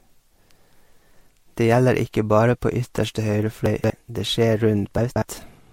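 Across the whole clip the speech has a layered, smeared coding texture, with the artefacts of different codecs heard together, and nothing is present above 16.5 kHz. The mix of two different artefact flavours at once, rather than a single codec's signature, points to transcoding between lossy codecs, likely an MP3 at around 66 kbit/s passed through Vorbis and then re-encoded as MP3 at 96 kbit/s. The higher final bitrate could not restore the detail lost earlier.

From 3.66 to 3.90 s the speech briefly jumbles. This is chunks out of order. A 60 ms block of audio plays three chunks later than it should, so the material after it comes first and the delayed piece lands afterward. The same thing happens again from 4.98 to 5.22 s. Unlike a dropout, nothing goes missing or silent, and unlike a stutter, nothing repeats. The sound is all there, just in the wrong sequence.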